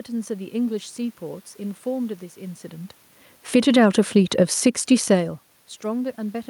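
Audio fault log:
3.70–5.09 s, automatic gain rising: the speech and the room noise behind it swell together by about 6 dB over roughly 1.4 seconds. The automatic gain control judged the input too quiet and raised its gain gradually, lifting everything at once.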